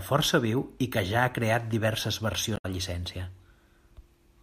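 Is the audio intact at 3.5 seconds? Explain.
Yes, at 3.5 seconds the speech is intact, with no dropout, click or other fault audible at that moment.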